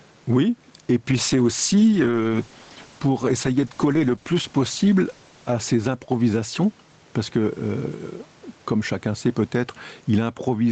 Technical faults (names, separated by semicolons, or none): gain pumping; call bitrate drop